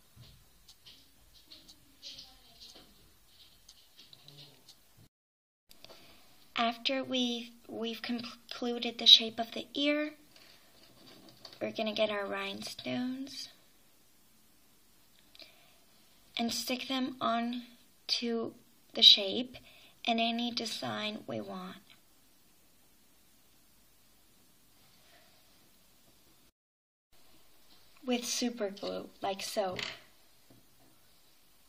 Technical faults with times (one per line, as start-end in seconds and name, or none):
16.51-16.63 processor overload crackle